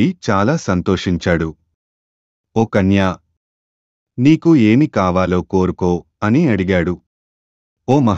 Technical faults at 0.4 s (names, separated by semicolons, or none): none